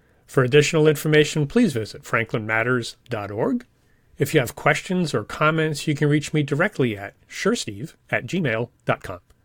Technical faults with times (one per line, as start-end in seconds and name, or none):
7.42-9.44 time-stretched section